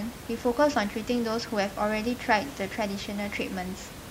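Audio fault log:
No faults heard.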